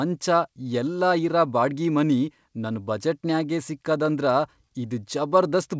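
No technical faults occur at any point in the speech, which comes through a call path with nothing above 8 kHz, as expected for a G.722 connection.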